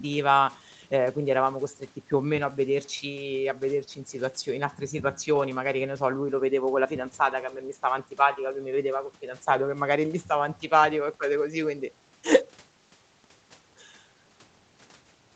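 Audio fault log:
No faults were found in this speech. Nothing in it reaches above about 8 kHz, which fits the band limit of the call microphone processing and the Opus codec on the WebRTC call path.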